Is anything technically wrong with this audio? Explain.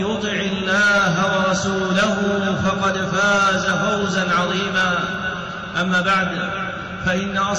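Yes. Clock slip clicks run from 0.37 to 7.40 s, faint regular ticks about every 0.4 s, roughly fifteen in all. The likely cause is two devices on free-running clocks roughly 50 ppm apart, so a single sample is dropped or repeated each time the drift reaches one sample.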